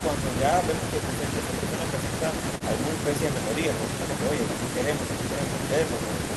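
No faults to report in this speech; the call path runs as intended, with the expected Opus coding character and a top end that stops at 12 kHz.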